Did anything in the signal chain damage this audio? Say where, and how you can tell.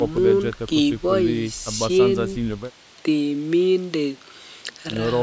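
No, nothing in the chain stood out on listening; the faint room noise sits about 37 dB below the speech, and the call's microphone processing leaves nothing above 8 kHz, both as expected.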